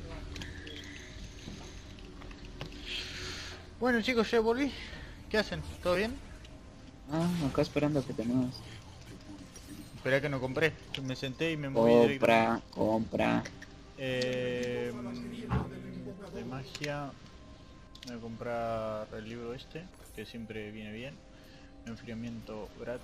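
At 12.25 s a block of digital silence zeroes just 1.16 ms of audio. The abrupt unfaded edges make it a single tick, too short to hear as a gap.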